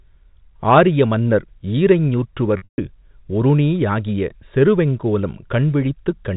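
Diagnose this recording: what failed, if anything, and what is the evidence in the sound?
Hard clipping at the converter or gain stage, 0.70 to 0.80 s: peaks overdriven by about 3 dB are cut flat, giving crackle on the loudest syllables rather than the steady fuzz of heavy distortion.

Packet loss with pitch repetition on the network path, 2.58 to 2.78 s: roughly 180 ms goes missing, the longest gap 140 ms, bridged by a held, buzzy repeated pitch period that fades rather than clicking to silence.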